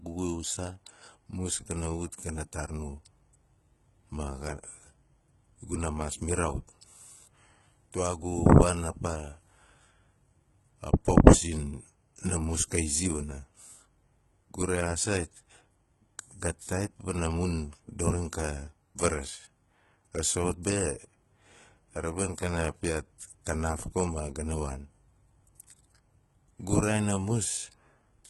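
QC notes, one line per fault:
Throughout, HE-AAC compression: the treble is not genuine, with s sounds coming out gritty and metallic, and nothing survives above 11.8 kHz. This is likely spectral band replication. The codec stores only the lower spectrum and rebuilds the top by copying lower bands upward under a coarse envelope, so harmonics fail to line up across the crossover. The heavy damage fits a very low bitrate, around 16 kbps, in the v2 mode.
20.63 s, pre-echo: a brief hiss, about 18 ms long, sits just ahead of a sharp attack, and the onset sounds softened and smeared. The transform codec spreads quantisation noise evenly across each block. Because this attack lands late in its block, noise sized for the loud part also fills the quiet gap before it, and that noise is heard as a short wash of hiss before the attack.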